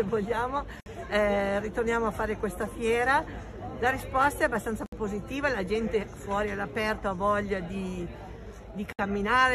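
At 0.80 s the sound just drops out for about 60 ms, then picks up exactly where it left off. The same thing happens at 4.86 s and 8.93 s, each time for about 64 ms. That four-second spacing is the giveaway: it's a gap at a join of encoded pieces. Each chunk was encoded on its own and butted together untrimmed, so the encoder's start-up delay and last-frame padding sit in the middle as dead air, with smeared edges.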